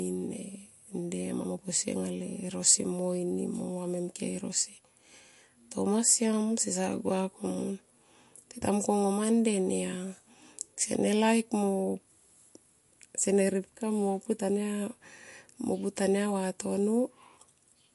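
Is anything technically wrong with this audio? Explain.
Yes. MP3 compression runs throughout: nothing sounds above 11.3 kHz and the speech has a plainly audible watery swirl, likely from an MP3 encoder starved at a bitrate that fits about 49 kbps.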